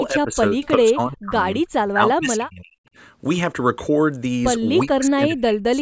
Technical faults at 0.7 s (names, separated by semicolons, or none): speech suppressed in double talk; echo leak